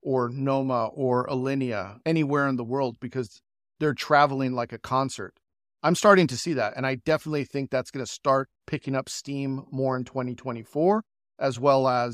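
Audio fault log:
No faults detected in this speech clip.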